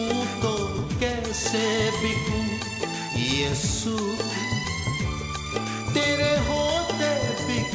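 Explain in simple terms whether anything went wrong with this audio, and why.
Nothing went wrong: the audio came through an ordinary G.722 call link, which keeps nothing above 8 kHz and so sounds slightly dull up top, exactly as that codec normally does.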